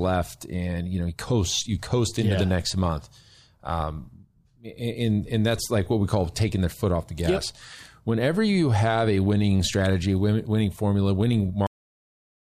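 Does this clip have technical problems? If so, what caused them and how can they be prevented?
Yes, there's a cut-off end. Right after "winning strategy winning formula" the speech stops dead at 11.67 s, mid-sound, with no natural decay, and the rest of the clip is digital silence. That happens when the final chunks of audio never get written out, so the recording ends where the last buffer was saved rather than where the speaker finished. To prevent it, make sure the recorder drains and flushes its buffers before the file is closed.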